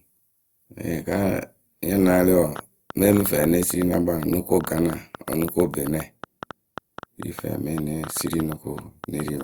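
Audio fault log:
2.56–9.42 s: train of clicks. From 2.56 s to the end, around fifty short clicks of much the same shape tick over the speech at about 7.5 per second, spaced unevenly. They stand well above the speech, roughly 10 dB over it, and carry on through the pauses. That marks them as added pulses rather than a single dropout or codec glitch. Their persistence and uneven pace point to a likely cause in electrical interference or a faulty connection or power supply.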